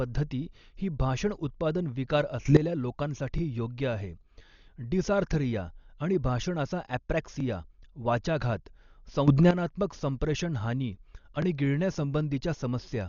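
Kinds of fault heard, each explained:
Dolby Digital compression: The whole speech clip sounds dull and rough, with nothing above 6.9 kHz, which fits a heavily starved low-bitrate encode, likely Dolby Digital at around 40 kbps. A spectrogram shows a hard ceiling, with grainy, flickering noise patches filling gaps between harmonics.
Sudden gain jump: At 2.45 s the level abruptly rises by about 15 dB for roughly a tenth of a second, and at 9.28 s by about 11 dB for 0.23 s, likely an unramped digital gain step. The waveform shows vertical steps in envelope, background noise included.
Overlapping chunks: Every 4 s, at 3.38, 7.40 and 11.42 s, a 20 ms slice of speech plays twice because each new chunk begins before the previous one finished. It is heard as a tiny stutter or click; the waveform shows a repeated segment with a discontinuity at the join.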